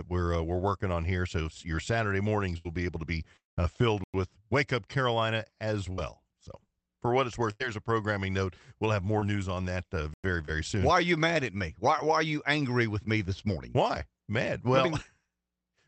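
At 2.57 to 2.67 s a burst of packet loss turns the speech into a held buzz or fading hiss that dies away before the talk resumes further on. It recurs at 5.92 to 6.00 s and 7.52 to 7.62 s. Each time, roughly 60 to 80 ms of speech is simply gone, unlike a chunk gap, where nothing is lost.

From 3.37 to 3.58 s the sound stretches into a fading buzz or hiss, then drops to silence for about 160 ms before speech returns with roughly 0.2 s missing. The cause is likely a long network dropout. Its length and dead-silent tail set it apart from the shorter bursts.

At 4.04 to 4.14 s and again at 10.14 to 10.24 s there is a gap between chunks: a 100 ms hole, about 6 s apart. No speech is skipped and no smear fills it, which separates it from packet loss.

At 9.20 to 9.24 s and 10.45 to 10.50 s, short concealed packet loss leaves a brief smear or wobble where about 20 ms was patched over, much too quick to become a buzz. 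All of this comes through an Opus call path whose audio stops at 8 kHz.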